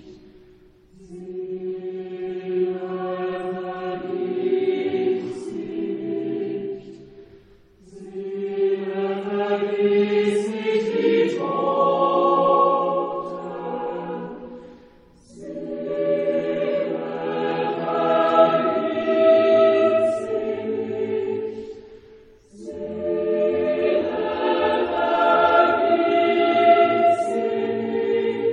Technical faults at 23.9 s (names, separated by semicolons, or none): compressed frames skipped